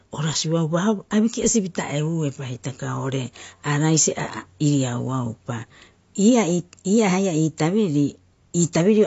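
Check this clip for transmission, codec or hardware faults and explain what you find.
One codec fault runs through the whole speech clip; no transmission or hardware faults are present.

Throughout, the likely cause is AAC compression at a low bitrate, consistent with AAC-LC around 32 kbps. To save bits, the encoder quantises its frequency lines coarsely and drops the top band entirely, leaving nothing above 7.6 kHz. The codec damage is plainly audible: the speech sounds dull and smeared, with a warbling, fizzy texture on sustained sounds and sibilants.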